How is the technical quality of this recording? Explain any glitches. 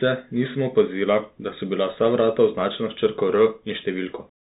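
Poor quality, because the speech has passed through a Bluetooth CVSD headset codec for the whole clip. The damage is plainly audible. CVSD sends one bit per sample, telling the decoder to step up or down. Its step size adapts as it goes, which fits a 64 kbps CVSD stream. Nothing above about 3.8 kHz survives, so the speech sounds narrow and dull. Fast, loud high sounds outrun the step. S sounds turn scratchy, and a granular hiss sits beneath the speech.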